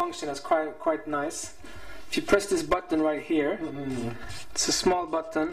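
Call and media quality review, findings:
Channel delay (comb filtering), throughout: hollow, phasey coloration. One channel lags by roughly 3 ms before mono summing, cancelling shared content near 150 Hz and at evenly spaced frequencies above. Spectrogram shows fixed horizontal notch bands for the whole duration.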